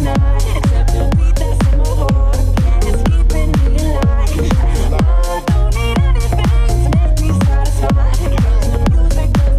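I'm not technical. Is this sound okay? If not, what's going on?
Yes, this sound is okay, and nothing is going on that needs fixing.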